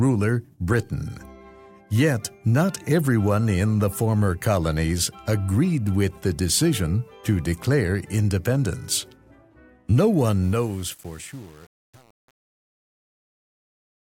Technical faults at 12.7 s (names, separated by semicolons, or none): truncation distortion on a fade